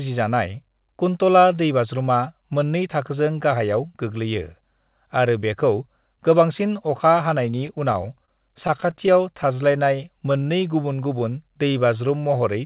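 Speech heard through a narrowband call channel with nothing above 4 kHz, which points to G.711 mu-law at 64 kbps, has scattered short gaps from 7.67 to 11.23 s. About twenty small holes, the longest around 30 ms, were patched by stretching the last sound, covering roughly 7% of that stretch. They show up as separate brief ticks and smears, not one continuous dropout. From 11.08 to 12.08 s a jitter buffer slow-down repeats pitch periods to rebuild its reserve, so the speech runs at 91% speed and gains 98 ms. The pitch stays the same and sounds are drawn out, unlike a playback-rate slowdown, which would also lower the pitch.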